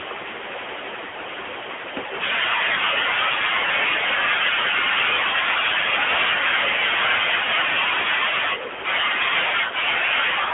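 Right from the start the whole speech clip has that AMR narrowband mobile codec sound. The band is squeezed to roughly 300 Hz to 3.4 kHz, so nothing airy up top and thin lows. The codec models the vocal tract and drives it with a handful of pulses per subframe, and at this rate the damage is plainly audible: a buzzy, synthetic edge on the voice that points to something around the 10.2 kbps mode.

Then there are two spots of lost AMR speech frames. From 1.08 to 1.14 s the sound smears and sags for about 40 ms, which sounds like two consecutive frames failing. The decoder just carries the last good pitch and filter settings forward while turning the gain down. A shorter one hits at 5.30 to 5.33 s, about 20 ms, and comes across as a quick dip with a little warble before the voice comes back weak or rough for a moment.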